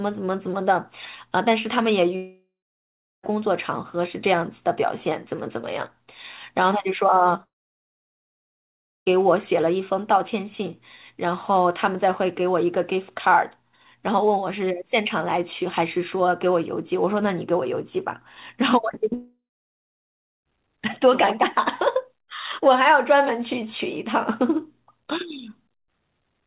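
Three gaps open up in the speech, at 2.16 to 3.26 s, 7.43 to 9.09 s and 19.14 to 20.49 s, each the likely result of a long network dropout. The receiver smears the last sound into a fading buzz, then goes quiet: about 0.74 s of silence in the first gap, nearly all of the 1.6 s in the second, and about 1.05 s in the third. The speech then resumes with those stretches simply gone. Throughout, nothing reaches above 4 kHz, which fits a 64 kbps G.711 A-law call path.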